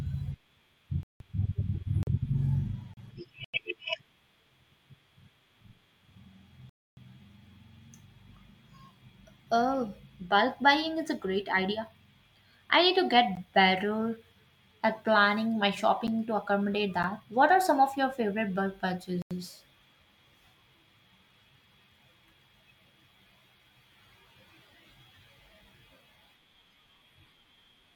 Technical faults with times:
1.03-1.20 Bluetooth stall
2.03-2.07 block of digital silence
2.94-2.97 block of digital silence
3.44-3.54 Bluetooth stall
6.69-6.97 Bluetooth stall
13.35 block of digital silence
16.07 block of digital silence
17.03 block of digital silence
19.22-19.31 Bluetooth stall

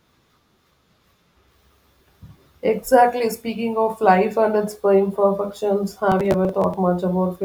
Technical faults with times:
6.12-6.74 processor overload crackle

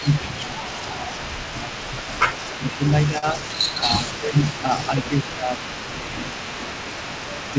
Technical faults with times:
0.00-7.59 echo leak
0.02-1.14 speech suppressed in double talk
1.60-1.78 speech suppressed in double talk
2.58-2.80 speech suppressed in double talk
3.18-3.25 short stall from a late packet
3.82-5.52 speech suppressed in double talk
5.94-6.53 speech suppressed in double talk

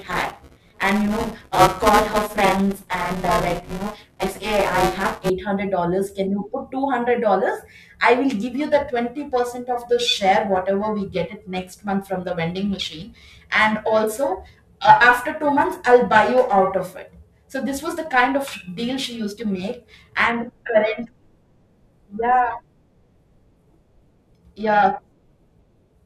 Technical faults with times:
0.00-5.30 buffer tearing
8.30-26.05 periodic clock jitter

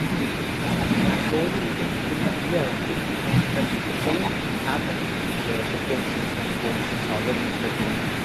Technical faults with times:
0.00-8.24 echo with no canceller

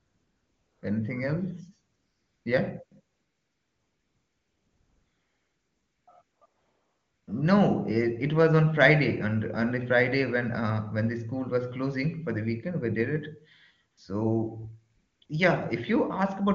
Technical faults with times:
0.00-0.81 AMR comfort noise
1.95-2.45 AMR comfort noise
2.85-7.27 AMR comfort noise
13.91-13.97 AMR comfort noise
14.95-15.29 AMR comfort noise

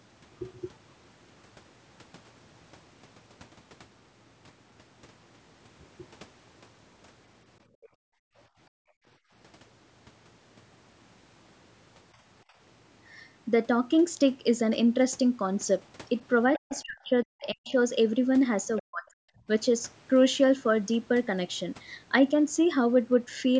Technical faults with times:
7.67-8.36 background gated by the echo canceller
8.69-9.32 background gated by the echo canceller
12.45-12.56 background gated by the echo canceller
16.55-16.81 other side's voice leaking through
16.58-17.75 speech suppressed in double talk
18.67-19.18 speech suppressed in double talk
18.77-18.82 other side's voice leaking through

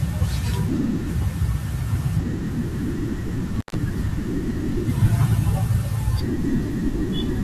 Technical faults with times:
3.56-3.75 intermittent contact

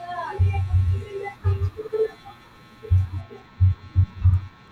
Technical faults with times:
3.21-4.72 channel delay (comb filtering)

